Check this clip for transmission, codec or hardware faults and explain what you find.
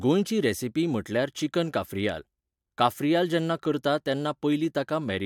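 Nothing in this speech recording points to a fault. There is nothing further to report.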